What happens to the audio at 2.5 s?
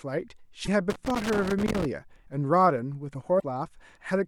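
At 2.5 s the speech carries on cleanly, with no dropout, click or other fault at that moment.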